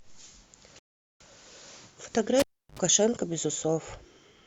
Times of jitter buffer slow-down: none

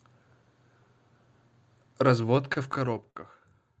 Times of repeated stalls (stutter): 2.21-3.18

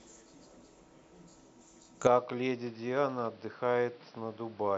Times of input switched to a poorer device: 2.07-4.77

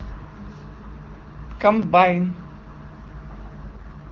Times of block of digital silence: 1.82, 3.08

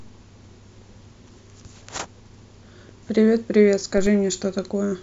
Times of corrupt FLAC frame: 3.97-4.07

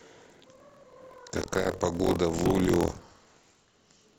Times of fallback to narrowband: none

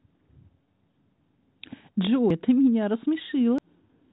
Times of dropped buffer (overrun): 2.30, 3.58

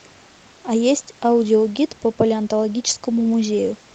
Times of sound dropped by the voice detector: none

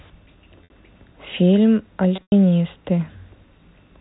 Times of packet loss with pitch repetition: 0.64-0.70, 2.16-2.32

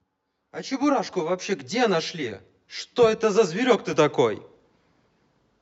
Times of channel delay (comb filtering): 0.00-3.93

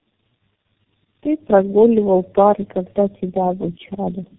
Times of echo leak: none

